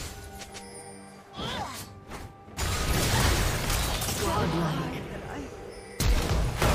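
No technical faults can be heard anywhere in the clip, so there is nothing to describe in time order.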